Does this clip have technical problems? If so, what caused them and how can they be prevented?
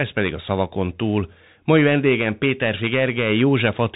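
Yes. Throughout the clip, the speech passed through a Bluetooth CVSD headset codec, which sends one bit per sample saying only whether the waveform rises or falls, with an adaptive step size. The result is consistent with a 64 kbps stream. Nothing above 3.8 kHz survives, so the speech sounds narrow and muffled. The coding damage is plainly audible: a granular hiss sits under the speech, s sounds turn scratchy, and fast loud changes distort where the step size can't keep up. To prevent this, record through a wired microphone or a Bluetooth link using a wideband codec rather than the headset call profile.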